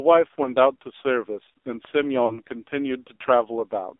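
Throughout, the speech sounds boxed-in and buzzy, confined to roughly 300 Hz to 3.7 kHz with heavy synthetic roughness. This is the AMR narrowband mobile codec: an 8 kHz vocal-tract model with sparse pulses, and damage this heavy fits a low mode near 5.9 kbps.

From 0.44 to 0.51 s a brief dip and warble interrupts the speech, and from 2.26 to 2.40 s the sound smears out, fades, then returns rough. These are lost AMR speech frames. The decoder repeated the last good settings at falling gain, which fits one and then two missing 20 ms frames.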